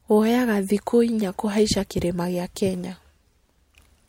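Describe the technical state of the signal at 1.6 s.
At 1.6 s the speech signal is intact, with no audible fault at that moment.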